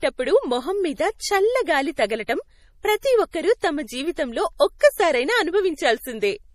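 MP3 compression runs through the whole speech clip and is plainly audible. Nothing is present above 15.2 kHz, a hard treble ceiling of the kind an encoder imposes when bits are scarce, and the damage level fits a low rate of around 40 kbps. The likely cause is that the encoder, short of bits, discarded quieter frequency detail frame by frame. The result sounds watery and swirly, with metallic chirps on s sounds and smeared onsets.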